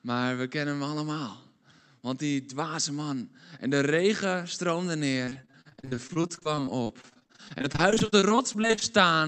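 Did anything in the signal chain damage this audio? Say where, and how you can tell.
Yes. After "de regen stroomde", 5.25 to 8.89 s turns choppy and robotic. This is repeated network packet loss, with gaps of up to 38 ms patched by repeating earlier sound.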